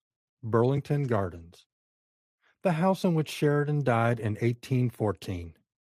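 There are no technical faults in the audio to describe.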